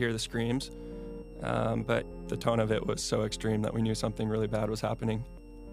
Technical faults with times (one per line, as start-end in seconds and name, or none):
0.00-5.72 switching supply whistle